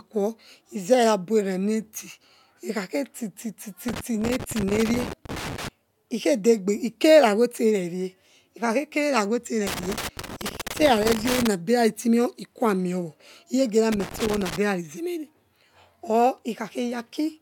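Irregular bursts of crackle and scratching break into the speech three times: from 3.88 to 5.68 s, from 9.67 to 11.47 s, and more briefly from 13.92 to 14.57 s. This is loose connector crackle. A worn or dirty contact somewhere in the cable path keeps making and losing connection as it shifts, so the signal is chopped on and off in rapid, uneven bursts.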